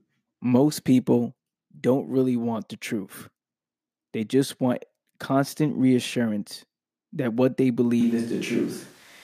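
From 8.01 s, likely a switch to a distant microphone: speech hollows, spectrogram bass thins, waveform level holds, room noise about 30 dB below speech.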